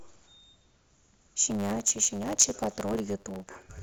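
Block size mismatch (truncated), 1.47 s to the end: each block's tail is dropped, leaving a 100 Hz buzz and speech running 1.09 times faster, timbre unchanged.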